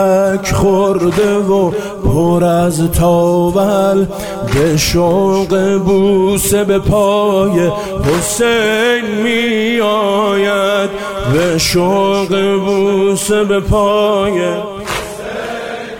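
No faults are audible anywhere in the clip.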